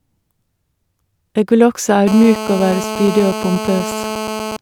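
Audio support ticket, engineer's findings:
GSM phone buzz, 2.08–4.57 s. Nearby 2G handset on an active call; audio front end rectifying its radio bursts at about 217 Hz. Result: hard, raspy buzz, harmonic-rich, steady, about 9 dB below the speech, unrelated to it.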